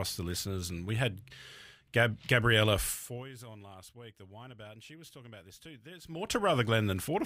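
A speech clip with zipper noise during two level moves. From 2.92 to 3.29 s the level drops by roughly 20 dB. From 6.00 to 6.36 s it rises by about the same amount. Each move is made in 1 dB steps, around fifty a second, with no smoothing between them. Every step leaves a tiny click, and together they form a fast ticking that rides on the speech.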